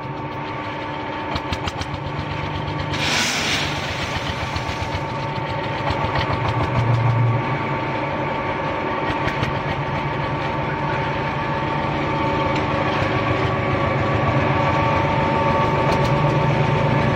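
Nothing technical goes wrong anywhere in this audio, so there's no fault here to point to.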